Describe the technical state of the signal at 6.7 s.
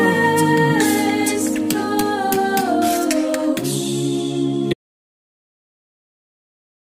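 At 6.7 s there is nothing at all: silence with no room tone, part of an audio dropout to silence that begins abruptly at 4.74 s and runs to the end of the clip. The input was likely lost, with the recorder continuing to write silence.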